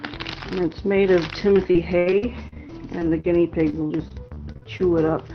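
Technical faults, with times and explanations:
1.39–4.82 s, repeated packet loss (robotic sound): around twenty short holes recur across this stretch, the longest about 74 ms. Each one is patched by extending the preceding sound, about half a second of rebuilt audio in all, roughly 16% of the span. Because the holes follow each other so closely, the repeated stretched fragments give a choppy, robotic texture with pieces missing, heard against the call codec's 6 kHz upper limit.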